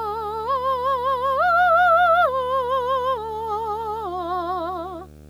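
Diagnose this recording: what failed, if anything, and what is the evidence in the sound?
Video or display buzz has entered at the analogue wiring stage, running through the whole music clip as a 75 Hz buzz roughly 25 dB below the music. A screen or video cable is coupling its field-rate energy into the audio lines. A spectrogram would show a steady 75 Hz line and its harmonics.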